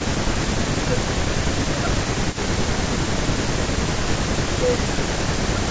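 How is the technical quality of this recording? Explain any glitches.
The recording carries two recurring faults from hands-free call processing, echo leak and speech suppressed in double talk.

Echo leak appears at 0.00–0.08 s, 2.30–2.97 s and 3.29–5.04 s. The far end's echo canceller likely failed to remove its loudspeaker pickup, so a copy of the speech returns about 194 ms late and about 15 dB below it, heard as a faint trailing double.

Speech suppressed in double talk occurs at 0.57–0.95 s, 1.70–3.37 s, 3.89–3.97 s and 4.42 s to the end. While both sides speak, the canceller likely mistakes the talker for echo and attenuates everything, so the speech dips by roughly 15 dB (about 10 dB at 3.89 s) and sounds ducked or patchy.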